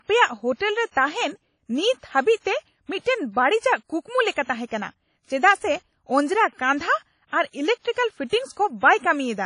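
From start to finish, the speech carries plainly audible WMA compression artefacts. Nothing remains above about 10.1 kHz. Quantisation noise smears over tens of milliseconds, giving a ringing, washy quality. A hiss breathes with the signal. This likely points to a low bitrate near 32 kbps.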